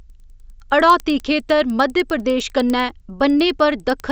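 Speech with faint, regular ticks at 10 Hz throughout, only while sound is present: a resampler restarted on every block. Each 100 ms block, consistent with a 16 kHz to 48 kHz conversion, lacks its neighbours' edge samples. A spectrogram shows thin vertical broadband lines every 100 ms; the waveform shows small steps at block joins.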